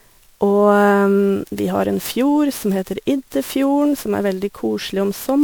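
Throughout the speech there is generation loss: the sound is swirly, smeared and hollow, with blurred consonant attacks, likely from around ten rounds of MP3 re-encoding at what fits 128 kbit/s. A spectrogram shows scattered holes in the spectrum and nothing above 21.4 kHz.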